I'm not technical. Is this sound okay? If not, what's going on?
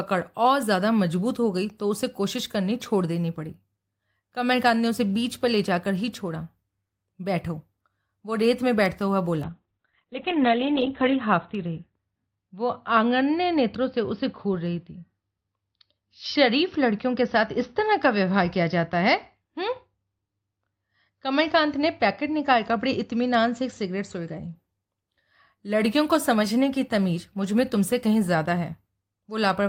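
No. From 9.45 to 24.61 s there's a call bitrate drop: the connection's speed estimate fell, so the call squeezed the audio into far fewer bits. The speech turns muffled and rough, losing everything above 4 kHz, until quality returns.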